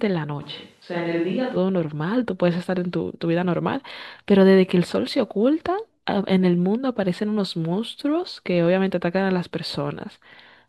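From 0.42 s to 1.56 s the speech abruptly turns roomy and hollow, loses its low end, drops by roughly 5 dB and sits over a faint bed of room noise, about 35 dB below the speech. This is most likely a switch to a distant microphone, with the close microphone dropping out. What separates it from added reverb or simple filtering is that tone, level and background noise all change together and snap back sharply at 1.56 s.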